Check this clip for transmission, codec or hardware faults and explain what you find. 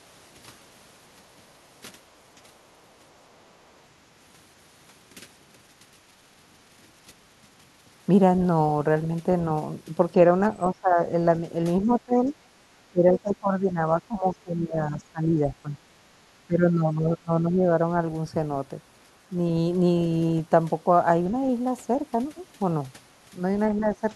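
Two echo-canceller faults affect this speech clip. The remote party's voice leaks through, and the local talker is suppressed during double talk.

Other side's voice leaking through occurs from 2.78 to 3.56 s and from 11.82 to 12.01 s. A second voice is heard behind the talker. It is very faint at first and much louder in the second stretch. This is likely loudspeaker output reaching the microphone that the echo canceller left in.

Speech suppressed in double talk occurs from 10.71 to 11.0 s, 11.85 to 12.34 s, 12.9 to 15.74 s, 16.47 to 17.62 s and 23.74 to 24.02 s. The talker's level dips, by around 20 dB at worst and only slightly at the end. The likely cause is the canceller turning everything down while both sides spoke at once.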